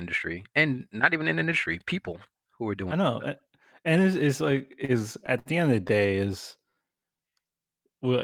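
From 4.51 to 5.49 s you get repeated stalls, a stutter: packets kept turning up late, the jitter buffer ran dry nine times, and the receiver stretched the last sound to cover, about 161 ms in all, longest 67 ms. Nothing's lost, but it drags and hiccups.

Then at 6.64 to 7.32 s there's a jitter buffer slow-down. The receiver repeated pitch periods to rebuild its reserve, adding about 107 ms, so that stretch plays at 85% speed with the pitch unchanged, sounding drawn out.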